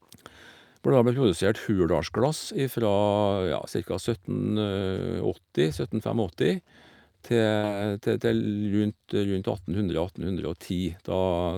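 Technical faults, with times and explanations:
7.57 to 7.66 s, burst of packet loss: a short run of speech packets never arrived in time, so the receiver stretched the last sound it had for about 57 ms, lowering it as it went, then jumped ahead with about 60 ms of speech skipped. On a spectrogram the harmonics or noise freeze into flat, smeared bands that fade; the waveform shows a decaying repeat and then an abrupt restart.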